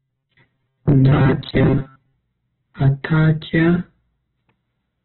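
The whole of this five-second speech clip has most likely been through heavy Opus compression at a very low bitrate, in the range of 8 kbps, with the encoder's music mode filling starved bands with folded or noise-like energy rather than leaving gaps. The audio is narrowband, with nothing above 4.5 kHz, so it sounds muffled throughout, and the tonal parts of the speech come across rough, grainy and noisy instead of clean.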